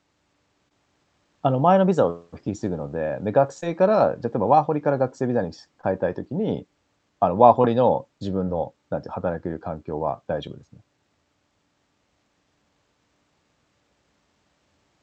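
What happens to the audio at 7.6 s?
At 7.62 to 7.65 s a short concealed packet loss occurs: about 10 ms of the call arrived too late, so the receiver extended the preceding sound for about 16 ms before blending back. The speech briefly smears or wobbles, and a quick consonant may vanish.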